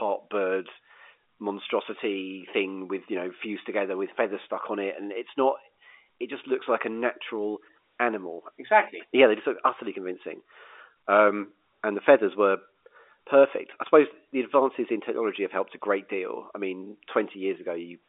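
Listening to this speech recording, nothing stood out as a technical problem.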